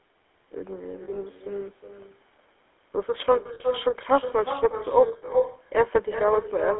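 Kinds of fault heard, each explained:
Echo with no canceller: The far end's loudspeaker is leaking back into its microphone and nothing strips it out, so every phrase returns around 400 ms later as a thinner copy sitting only about 7 dB below the speech.
GSM full-rate codec: The speech has that buzzy, gravelly pulse-excited texture of the old GSM full-rate codec, plainly audible and consistent with 13 kbps coding. The line band runs roughly 300 Hz to 3.5 kHz, so there is no top end.
Lost GSM frames: At 1.04–1.2 s, 3.54–3.62 s and 5.08–5.29 s the decoder patches missing frames by repeating the last good one, giving brief metallic, ringing smears. The first and last total about 100 ms in short scattered runs, and the middle one about 60 ms.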